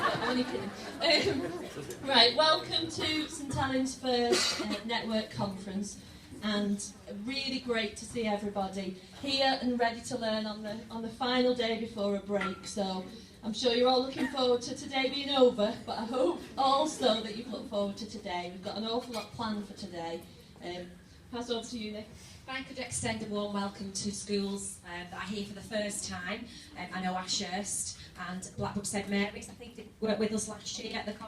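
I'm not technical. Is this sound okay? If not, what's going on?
Yes, it sounds fine; I hear no problems anywhere.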